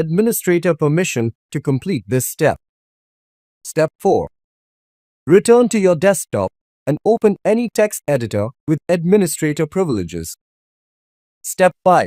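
No technical faults are audible.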